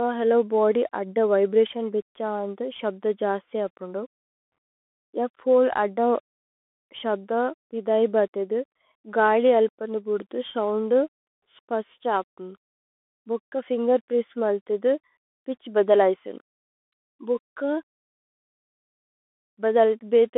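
Speech squeezed through a Bluetooth CVSD headset codec for the whole recording. The band runs from about 250 Hz to 3.5 kHz, so it's thin and boxy, with nothing up top. The codec damage is plainly audible. CVSD sends one bit per sample saying up or down, which fits a 64 kbit/s link, so the adaptive step can't keep up with loud high content. That's why sibilants turn scratchy, and the one-bit steps leave a granular hiss underneath.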